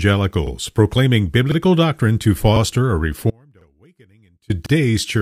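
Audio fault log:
0.47–0.52, 1.52–1.57, 2.57–2.61, 3.61–3.66 and 4.66–4.71 s, overlapping chunks: each 1.0 s processing block begins about 48 ms before the previous one ended, so that slice plays twice at every join. The result is a regular once-per-second stutter, heard just before "doctrine to" at 1.52 s and just after "doctrine to" at 2.57 s.
3.30–4.50 s, audio dropout to a faint residue: the wanted signal was likely lost for about 1.14 s while the path downstream stayed live. The sound cuts off abruptly, and the gap holds only a faint trace roughly 35 dB below normal level. The 3.61 s chunk join falls inside this gap.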